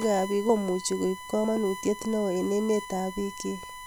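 USB whine runs throughout: a steady 1 kHz tone about 15 dB below the speech, from the USB bus's 1 ms frame current leaking through power or ground.

Audio missing between chunks at 0.49 s, 1.44 s and 3.34 s: roughly 50 ms vanishes each time, leaving abrupt skips, likely lost while the recorder switched between 1 s chunks.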